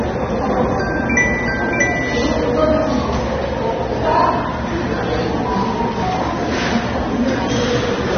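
AAC compression runs from start to finish and is the likely cause of the dull, band-limited character of the audio. Nothing reaches above about 6.3 kHz, consistent with the AAC-LC encoder lowering its cut-off to fit a low bitrate, plausibly around 24 kbps. The quantisation against a hearing model leaves the coding damage plainly audible, with the sound smeared and lacking its upper detail throughout.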